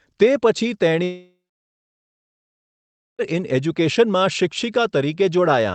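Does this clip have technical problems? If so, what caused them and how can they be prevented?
Yes. From 1.03 s to 3.22 s there is a long network dropout. A brief fading buzz or hiss continues the last sound, then about 1.8 s of silence. Speech returns with that stretch missing, likely from lost packets. A more stable network connection would prevent it.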